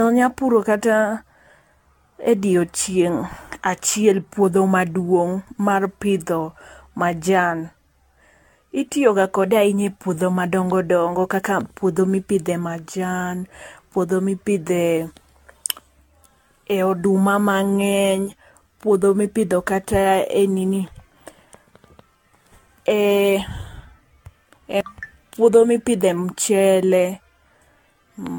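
From start to finish the speech sounds swirly and hollow, with smeared consonant attacks and a watery shimmer that seems worse than a bitrate near 96 kbit/s would give. The likely cause is generation loss: around ten rounds of AAC-LC decoding and re-encoding, each quantising on a shifted frame grid so the damage piles up. A spectrogram would show patchy holes and flickering high-frequency blocks, with onsets smeared in time.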